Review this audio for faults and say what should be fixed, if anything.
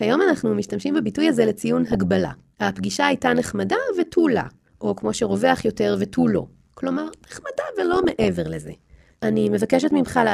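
A metallic buzz runs through the whole clip, with extra tones around each note from a ripple at around 100 Hz with level swings of about 11 dB. This is overlap-add ripple: windowed frames were rejoined with an overlap whose gains don't sum to a constant, so the loudness pulses once per frame. To prevent it, match the analysis window, synthesis window and hop size so the overlapped windows sum to a flat gain.

Burbling bursts break over the sound at 1.88–2.04 s, 6.21–6.55 s, 7.93–8.27 s and 10.06–10.12 s. This is DAB burbling: bit errors of a few tenths of a percent got past the error correction into the MP2 data, so wrong samples put short blips of noise in single sub-bands. To prevent it, improve reception or use error concealment that mutes corrupted frames.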